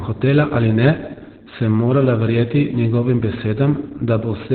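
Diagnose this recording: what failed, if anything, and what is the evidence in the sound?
Codec stage: heavy Opus voice compression throughout. The speech is muffled, hoarse and robotic, with nothing above 4.4 kHz, which points to narrowband SILK at roughly 8 kbps.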